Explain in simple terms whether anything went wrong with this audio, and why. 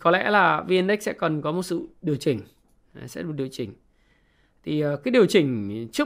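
Nothing went wrong here: the speech comes through without any glitches, dropouts or other problems to point to.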